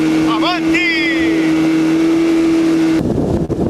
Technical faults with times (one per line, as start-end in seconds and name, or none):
0.00-3.70 clock drift between sender and receiver
0.04-2.86 repeated timing corrections
3.45-3.51 short stall from a late packet